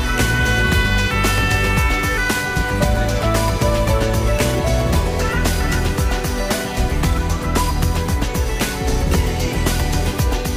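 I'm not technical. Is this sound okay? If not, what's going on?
No. Sample clock jitter runs throughout: the recorder's timing wobbles, so a hiss or roughness rides on the sound, growing with louder and brighter moments.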